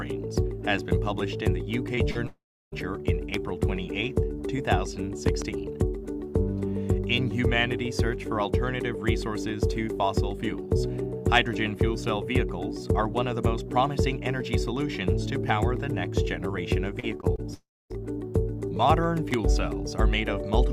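Between 1.95 and 1.99 s, and again from 2.11 to 2.17 s, the sound briefly smears and wobbles, with a tiny gap papered over. This is short concealed packet loss: about 20 ms and then 40 ms of audio never reached the decoder in time. The receiver bridged each hole by extending the preceding sound and then blended back into the real signal.

Right after, from 2.27 to 2.74 s, the sound trails off into a fading buzz and then falls silent for roughly a third of a second before resuming further along, with about 460 ms missing. This is a long network dropout, likely a stretch where no packets arrived at all. The receiver kept the last sound going for about 450 ms before giving up.

A sharp pop sits on top of the sound from 3.34 to 3.36 s, and a pair of pops follows between 5.28 and 5.44 s, each peaking about 15 dB above the surrounding level while the audio carries on underneath. These are loud pops, likely from a sudden voltage step such as a switch, static discharge or driver glitch, which the downstream circuitry shaped into a brief thump.

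From 17.00 to 17.40 s the sound turns choppy, the robotic sound of repeated packet loss. Five separate gaps, the longest 32 ms, were each patched by continuing the previous sound, so about a quarter of that span is filler rather than real audio.

Just after, from 17.54 to 17.92 s, comes a second long network dropout, likely another interruption in delivery. A decaying buzz gives way to about a quarter second of silence, and roughly 360 ms of audio is lost.

Finally, at 19.34 to 19.36 s, a single loud pop stands out about 20 dB above the signal, likely caused by another abrupt electrical transient.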